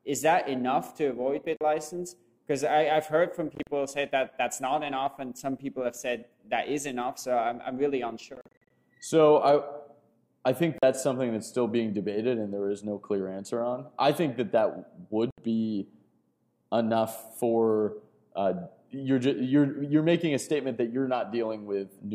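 The audio has brief silent holes at 1.57–1.61, 3.55–3.67, 8.35–8.70, 10.78–10.83 and 15.31–15.38 s, the longest stretch losing about 190 ms in gaps of up to 44 ms. The sound resumes as if it had played on, likely Bluetooth dropout from late, discarded packets.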